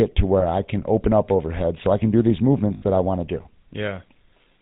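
Throughout, the speech has gone through the GSM full-rate codec, whose bandwidth and coarseness fit its 13 kbps mode. It rebuilds the vocal tract from regularly spaced excitation pulses and discards everything above 4 kHz, leaving the speech dull-topped with a plainly audible buzzy, gravelly roughness.

Lost GSM frames occur twice. At 0.40 to 0.44 s, just before "I can open up", the decoder fills a gap that fits a single 20 ms frame by repeating the last good frame, briefly turning the sound into a rough, metallic ring. At 2.74 to 2.84 s, between "I can do these" and "that I want to", the same concealment covers about 80 ms, which fits four frames, and the ring is longer.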